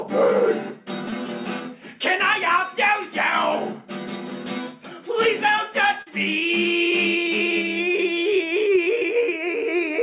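At 1.10 to 1.13 s and again at 6.02 to 6.07 s there's short concealed packet loss, about 20 and 40 ms missing, patched by stretching the preceding sound into a brief smear over the call path's 4 kHz-limited audio.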